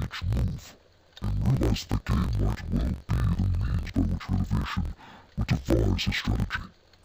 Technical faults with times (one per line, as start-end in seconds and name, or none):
0.00-7.04 interleaved audio read as planar